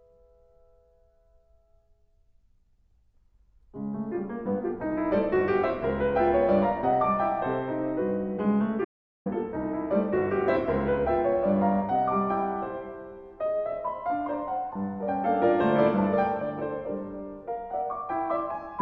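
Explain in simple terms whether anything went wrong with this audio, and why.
Between 8.85 and 9.26 seconds the audio drops to complete silence for about 0.41 s, an audio dropout to silence. The input was likely lost briefly while recording continued. Unlike a natural pause, even the background hiss vanishes, and the sound cuts off and returns abruptly.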